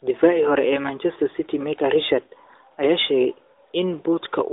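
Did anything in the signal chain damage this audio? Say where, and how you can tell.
No, nothing damaged this audio.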